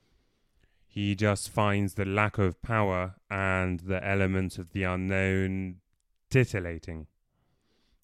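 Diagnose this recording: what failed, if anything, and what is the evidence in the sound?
Nothing failed: the speech signal shows no audible fault at any stage of the chain, from capture and conversion through to playback.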